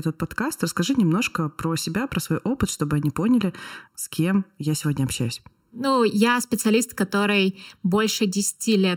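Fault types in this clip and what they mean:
Channel delay (comb filtering): one channel lags the other by about 0.7 ms, so the mono sum cancels at evenly spaced frequencies, the first near 700 Hz, leaving the speech hollow throughout; a spectrogram shows fixed dark horizontal bands about 1.4 kHz apart.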